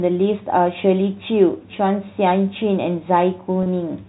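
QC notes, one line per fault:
3.63–3.66 s, packet loss with pitch repetition: a 30 ms gap, fitting one lost packet, is filled by looping the last pitch period, giving a brief buzzy hold. The waveform shows identical repeated cycles, and the spectrogram shows frozen harmonics.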